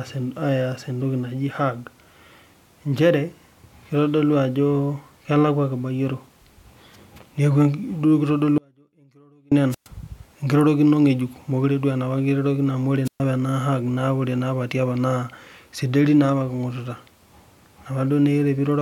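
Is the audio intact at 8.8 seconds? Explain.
No. At 8.8 s there is an audio dropout to a faint residue, from 8.58 to 9.52 s. The speech cuts out abruptly, leaving faint sound about 35 dB down. The likely cause is a lost signal on a live path.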